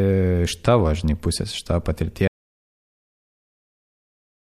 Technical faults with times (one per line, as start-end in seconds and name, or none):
2.28-4.41 audio dropout to silence